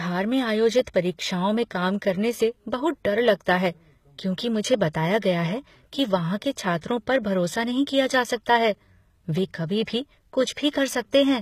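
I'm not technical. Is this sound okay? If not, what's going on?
No. HE-AAC compression artefacts run through the whole speech clip, from start to finish. The likely cause is heavy HE-AAC compression: to save space, it keeps only the lower part of the sound and fakes the treble by copying lower tones upward. That copied treble sounds bright but wrong, so s sounds come out gritty, metallic or lisping, and nothing at all remains above about 15 kHz. The damage is plainly audible.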